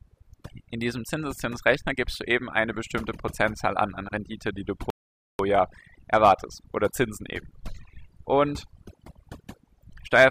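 Overdone noise removal runs through the whole speech clip. The denoiser was set too aggressively, pulling individual frequency bands down or out whenever they sat near its noise estimate. The background becomes near silence scattered with twinkling specks, and the voice's quieter components are removed with the noise.

At 4.90 s, right after "die du", a rebuffering stall cuts the audio to silence until 5.39 s, adding 0.49 s. Unlike a dropout, which would lose material, playback resumes exactly where it stopped, because the player was waiting for more downloaded data.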